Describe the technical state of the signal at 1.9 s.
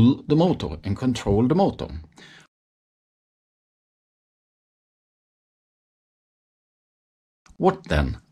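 At 1.9 s the signal is intact, with no dropout, clipping, glitch or other technical fault audible at that point.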